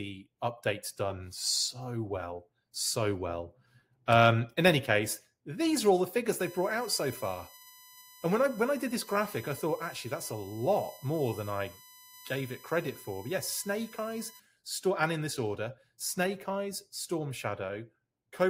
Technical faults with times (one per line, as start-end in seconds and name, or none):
6.40-14.40 USB whine